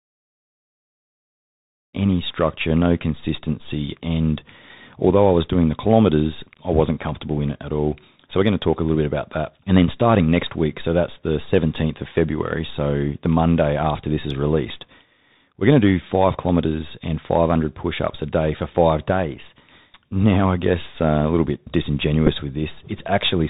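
From the start, after a smooth fade-in that is complete by about 2 s, the speech sounds boxed-in and dull. Nothing reaches above about 4 kHz, s sounds come out scratchy, loud bright moments roughen, and a fine granular hiss sits underneath. That is the Bluetooth CVSD headset codec. It encodes each sample as a single up-or-down bit with an adapting step, which fits a 64 kbps stream. Fast, loud high content outruns the step, leaving this narrowband grit throughout.

From 22.27 to 22.30 s there is a brief buzzy stutter lasting roughly 7.5 ms. That is a Bluetooth headset packet repeated. It points to two voice packets lost between headset and phone. The chip decoded the previous packet's bits again to fill the gap, and the repetition every 3.75 ms gives a short tone near 267 Hz until clean packets resume.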